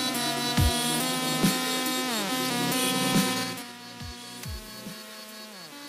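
From 3.34 s to 3.72 s the level drops by roughly 15 dB, but it falls in coarse 4 dB steps, around ten a second, instead of gliding down. This is zipper noise. Each jump lands abruptly on the waveform and leaves a small click, so the fade is heard as a ticking, zipping texture riding on the sound. That stepped ticking separates it from a smooth level change, which moves without any clicks.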